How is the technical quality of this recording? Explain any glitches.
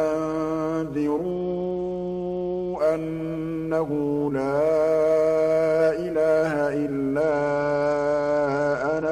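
Two stretches let it down, from 1.31 to 2.79 s and from 7.22 s to the end. Both are a Bluetooth SBC bit pool drop: a congested link forced the encoder down to a much leaner setting, roughly what you'd expect from around 83 kbps. The top sub-bands lose their bits, so the treble goes dull and gritty quantisation noise creeps in until the rate picks back up.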